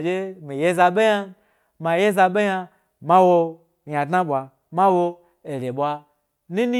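No technical faults are audible.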